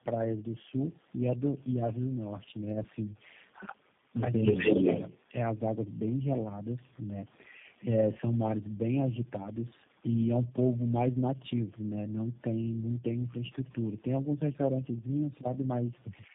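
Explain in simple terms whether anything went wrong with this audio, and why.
Two things went wrong. The whole clip suffers from tandem speech coding. The call passed through four separate speech codecs in a row, each squeezing what the last one had already damaged, so the speech sounds rough, muffled and warbly, with nothing above about 3.7 kHz.

Then, from 4.63 to 4.69 s, the speech briefly dips a little in level. That's likely speech suppressed in double talk: both ends spoke at once, and the echo canceller turned the talker down along with the echo.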